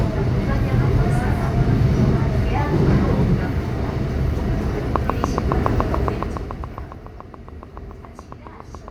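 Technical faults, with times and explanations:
4.96 to 8.89 s, train of clicks: a regular ticking at about 7.1 clicks per second runs to the very end, roughly thirty clicks in all. Each peaks some 20 dB above the sound, so they stand out even in quieter moments. The clicks are alike in shape and evenly spaced, which sets them apart from random crackle or one isolated pop. The cause is likely interference from nearby equipment or a faulty connection or power supply.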